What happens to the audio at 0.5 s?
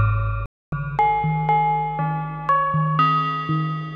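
There's a digital broadcast dropout from 0.46 to 0.73 s: the receiver lost good frames and muted, so about 264 ms of sound simply vanishes.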